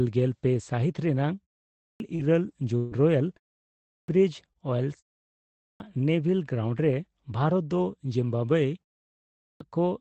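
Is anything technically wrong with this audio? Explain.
Yes, two things stand out in this speech. First, there's a clipped start after a pause at 1.71, 3.79, 5.5 and 9.27 s. Each time, after a short silence of roughly 0.3 to 0.6 s, the output device seems to have dropped into a sleep state, and by the time it woke and locked again about 0.29 to 0.33 s of sound was gone. So the speech jumps in abruptly, missing its opening sounds.

Second, from about 2.15 to 4.57 s there's repeated packet loss, giving that robotic sound. Five separate holes show up across the stretch, the longest around 140 ms, and roughly a tenth of the span ends up concealed. Each gap is papered over by stretching the last bit of audio forward, then the next one arrives soon after, so it comes across choppy with chunks missing. It runs through the clipped start at 3.79 s, so both problems stack there. All of this rides on an Opus call path whose audio tops out around 8 kHz.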